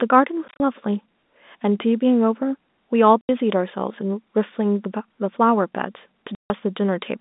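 Telephone-band speech, limited to roughly 200 Hz to 3.7 kHz by G.711 coding. It suffers packet loss filled with silence. Hard-edged gaps appear at 0.48 to 0.6 s, 3.21 to 3.29 s, and 6.35 to 6.5 s. The hole lengths suggest 10 ms packets.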